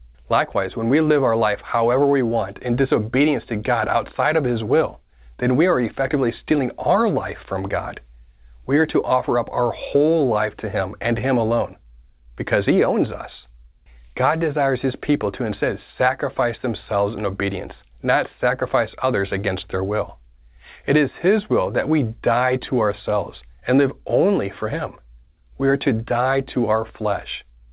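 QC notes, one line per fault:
No faults heard in this speech recording.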